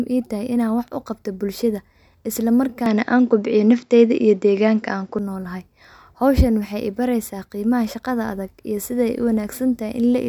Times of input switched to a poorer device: 2.86-5.19

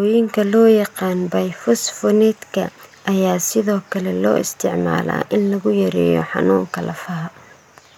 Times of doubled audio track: none

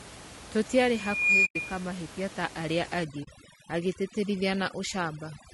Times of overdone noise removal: 3.04-5.54

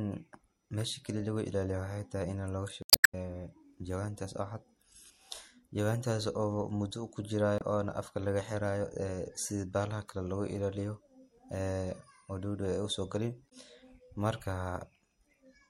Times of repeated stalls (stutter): none

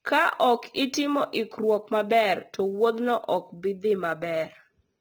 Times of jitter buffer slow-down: none

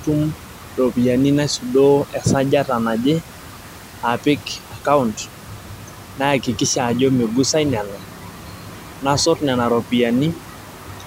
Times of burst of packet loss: none

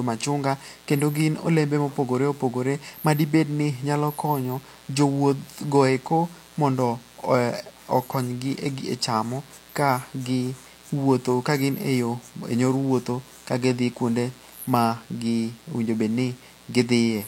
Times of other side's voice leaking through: none

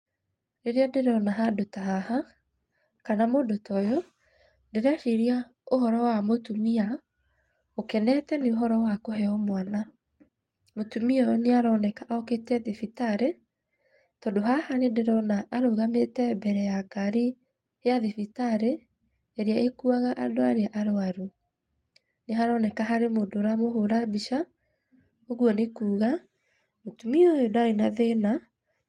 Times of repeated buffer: none

